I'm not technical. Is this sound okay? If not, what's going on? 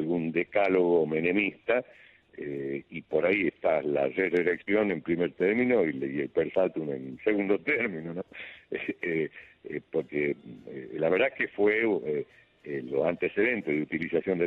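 Yes, the recording is technically sound, with nothing going wrong in the signal that you would need to worry about.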